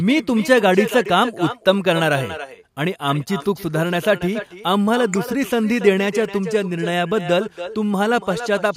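Right from the start and all the way through, the speech has echo with no canceller on it. Each phrase comes back roughly a third of a second later, about 11 dB quieter, sounding thinner than the original. That's the far end playing the call through a loudspeaker, its microphone catching it, and nothing on that side subtracting it out, so the talker's own voice returns after the network round trip and trails every line.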